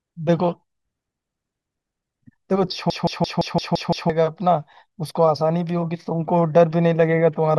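It's a speech clip, and from 2.90 to 4.10 s there's a system hang loop: one 170.67 ms slice repeats seven times at about 5.9 Hz, a machine-gun stutter, which fits an 8192-sample ring buffer replaying while the system froze, costing roughly a second of audio.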